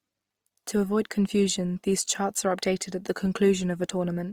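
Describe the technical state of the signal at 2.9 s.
At 2.9 s the speech carries plainly audible damage that runs through the whole clip, likely from Opus compression in its music (CELT) mode at a low rate, consistent with around 24 kbps. The encoder keeps each band's energy but fills starved bands with folded or noise-like content, so the sound turns grainy and rough rather than swirling. That separates it from MP3 damage, whose spectral holes give a watery, bubbling quality. Bandwidth stays full, reaching about 20.4 kHz.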